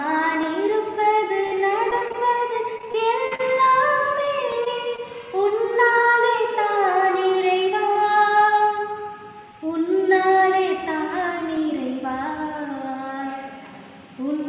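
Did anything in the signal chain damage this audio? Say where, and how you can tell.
Yes. Dropped samples at 0.43 s and 4.52 s, in the driver or buffer stage: each is a single sharp click, a thin vertical line across the spectrum, where the waveform jumps forward by a fraction of a millisecond. The likely cause is a buffer briefly skipping samples.

Repeated packet loss (robotic sound) from 1.44 to 2.16 s and again from 2.78 to 3.41 s, on the network stage. Holes come one after another, about 120 ms missing per stretch, the longest near 45 ms. The receiver patches each by extending the last sound, giving choppy audio.

Short concealed packet loss at 4.25 to 4.29 s, 4.65 to 4.68 s and 4.96 to 5.00 s, also on the network side: roughly 20 ms goes missing each time. The decoder continues the preceding sound and blends back into real audio, heard as brief smears or wobbles within the G.711 A-law call band, which stops at 4 kHz.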